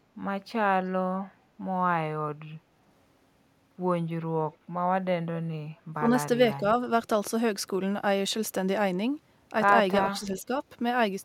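At 4.52 to 4.57 s a very faint, delayed copy of the speech surfaces for a moment, trailing the original by about 397 ms. This echo leak likely comes from a far-end loudspeaker whose echo canceller let a scrap of its microphone pickup return down the line.

The speech then briefly sinks in level at 5.99 to 6.07 s, more deeply at 6.57 to 6.64 s, and again gently across 10.05 to 10.51 s. This speech suppressed in double talk is likely an echo canceller mistaking overlapping talk for echo and turning it down.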